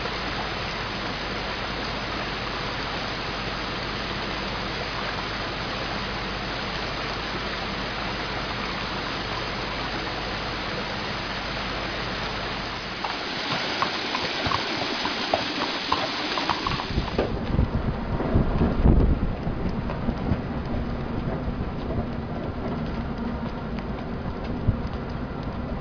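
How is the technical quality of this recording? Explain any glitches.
The recording has a clear aliasing fault across its whole length. The highest frequencies fold back onto wrong, unrelated pitches around a 5.5 kHz ceiling, which fits the sample rate being cut to about 11 kHz without an anti-aliasing filter first. These folded components sit only around 10 dB below the wanted signal, so bright, hissy content turns gritty and metallic, and the spectrum runs hard up to that edge.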